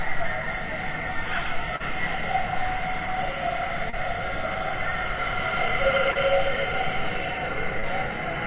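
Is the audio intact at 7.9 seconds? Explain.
No, not quite. Around 7.80 to 7.86 s there's a short concealed packet loss: a bit of audio didn't arrive in time, so the receiver stretched the preceding sound to cover the gap and blended back, leaving a brief smear or wobble.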